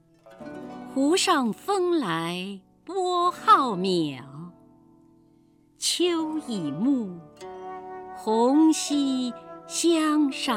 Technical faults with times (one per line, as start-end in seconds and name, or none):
none